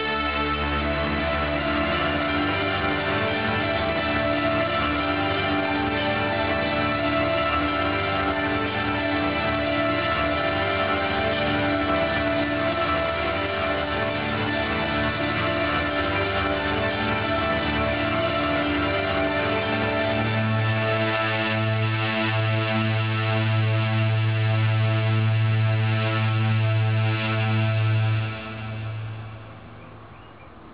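No technical faults can be heard anywhere in the recording. Nothing drops out, breaks up or glitches at any point along the way.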